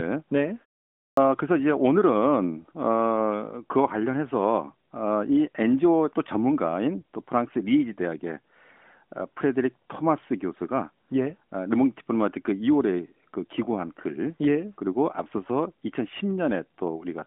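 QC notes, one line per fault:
1.10 s, clipped start after a pause: the device wakes late after 0.53 s of silence, swallowing the first 73 ms.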